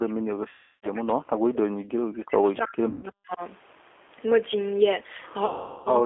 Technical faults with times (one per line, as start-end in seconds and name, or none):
0.00-6.06 G.729 codec
0.00-1.61 speech suppressed in double talk
0.49-0.87 VoIP packet loss concealed by the speech codec
2.89-3.06 VoIP packet loss concealed by the speech codec
5.46-5.91 VoIP packet loss concealed by the speech codec